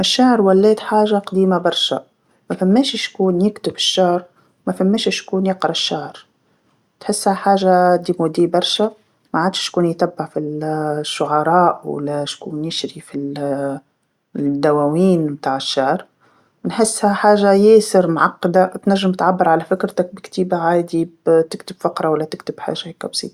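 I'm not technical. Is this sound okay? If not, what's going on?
Yes, it's fine; nothing in this recording is wrong.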